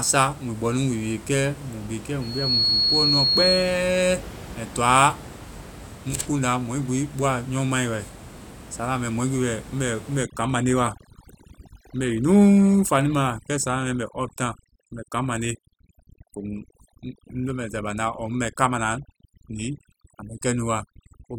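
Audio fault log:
10.23 to 21.38 s, overdone noise removal: from here on the denoiser clamps down hard, so the room noise, which sat about 18 dB under the speech, drops and breaks up into twinkly specks, and the speech's quieter bands get switched off too.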